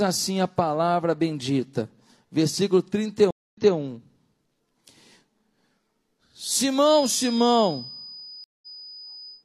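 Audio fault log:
3.31–3.75 s and 8.44–8.75 s, stream reconnect: the speech cuts to silence for 226 ms, then 184 ms, and resumes 213 ms and 128 ms earlier than where it stopped, repeating a short stretch. A plain dropout would skip ahead instead. The restart comes from a fresh decoder picking up mid-stream.
6.80–9.44 s, feedback whistle: a thin, steady 5 kHz tone sits roughly 15 dB under the speech, swelling and fading slowly in level but never building up. That steadiness without growth separates it from runaway howl. It is likely a loudspeaker-to-microphone loop held just at the edge of feedback.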